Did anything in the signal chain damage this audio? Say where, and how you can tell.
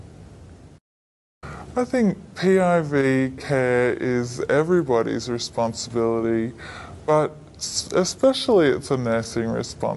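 Yes. The whole sound runs slow and low, at roughly 0.73 of normal speed and about 5.5 semitones flat, with tempo and pitch shifted together. That points to a wrong sample rate at playback, consistent with 44.1 kHz material played at 32 kHz.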